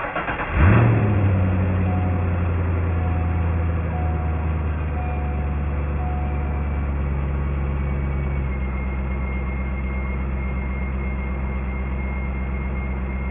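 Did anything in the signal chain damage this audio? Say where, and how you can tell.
Yes. Aliasing throughout, from sample-rate conversion. Energy above 3 kHz folds back as gritty tones about 20 dB below the signal. That fits unfiltered downsampling to 6 kHz.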